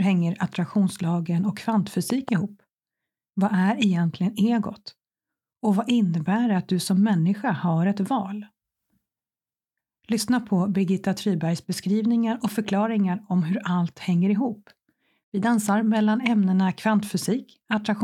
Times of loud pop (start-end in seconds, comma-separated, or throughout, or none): 2.10-2.31